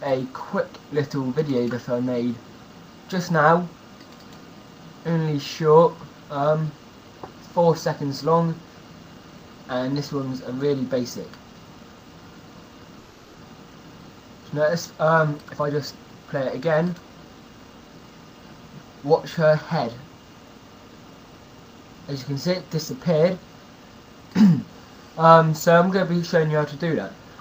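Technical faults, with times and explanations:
12.98–13.36 s, call audio freeze: for about 370 ms the sound stops moving forward and the last moment is stretched into a fading buzz rather than dropping to silence. The likely cause is packets held up in transit, leaving the jitter buffer empty so the receiver has to fill in. When delivery resumes the audio picks up exactly where it left off, so nothing is lost, but everything after this point now plays about 370 ms later.
15.45–17.98 s, jitter buffer speed-up: across these two and a half seconds the sound plays at about 114% of normal speed while the pitch stays the same, giving a rushed, clipped feel. Delayed packets evidently arrived in a bunch and the buffer was holding more than its target, so the receiver trimmed many tiny slices, each a pitch period or so, removing roughly 0.4 s in total to pull the lag back down.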